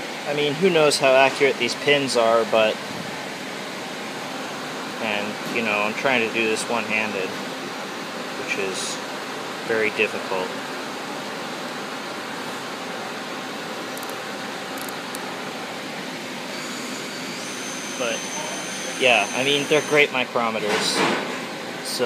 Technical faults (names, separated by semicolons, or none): none